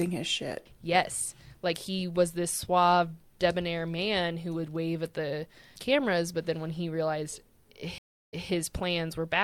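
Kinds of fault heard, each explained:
Stream reconnect: the connection dropped and the player restarted its decoder mid-stream. Just after "then when he realized" at 7.98 s, the speech cuts to about 0.34 s of silence, then picks up roughly 0.17 s earlier, so a short stretch repeats, with the restart fading in by 8.49 s. On a waveform this is a flat gap ending in a ramped onset; a spectrogram shows an abrupt full-band blank followed by repeated speech patterns.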